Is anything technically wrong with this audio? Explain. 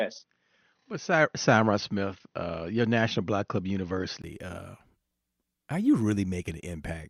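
Yes. From the start to 4.24 s, the recording was likely made through a poorer input device: an input switched to a poorer device, such as a second microphone or a headset's call profile. That path passes nothing above 6.3 kHz, so the speech sounds dull and boxy, with a faint noise floor of its own and a level a few decibels different. At 4.24 s a brief 20 ms silence marks the switch, and the sound opens up again.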